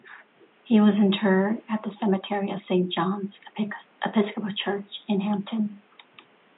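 No technical faults are present.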